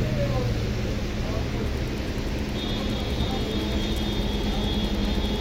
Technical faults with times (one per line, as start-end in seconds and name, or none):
1.60-5.40 Wi-Fi interference